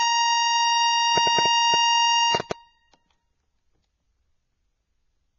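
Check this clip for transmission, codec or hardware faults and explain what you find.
Two faults are present in this music clip.

Transcoding between lossy codecs runs throughout. The sound points to a low-rate Vorbis encode, around 24 kbit/s, re-encoded as AAC-LC at a similar rate. Nothing remains above 7.1 kHz. Smearing from both codecs is heard together, dulling the top end.

A train of clicks runs from 1.18 to 2.52 s. There are about seven sharp pops, roughly 5.2 per second, at an uneven pace. They sit about 15 dB above the music. The likely cause is interference or a struggling interface injecting pulses.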